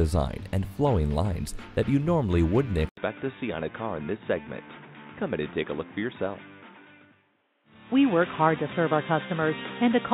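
At 2.89 s, an 80 ms gap. Then dull, quieter sound with faint background noise, nothing above 3.8 kHz. Likely input switched to a poorer device.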